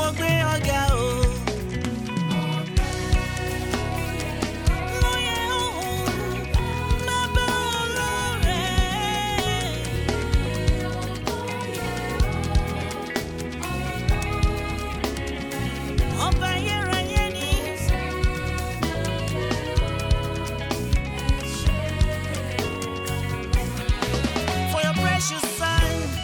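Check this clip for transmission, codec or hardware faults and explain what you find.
There's one fault here, a clean periodic one. From 2.90 s to 26.06 s, a click lands every 3.32 s, about seven in all. These are likely clock drift buffer slips: two clocks disagreeing by roughly 700 ppm, so the buffer periodically drops or repeats around 150 samples, which you hear as that regular tick.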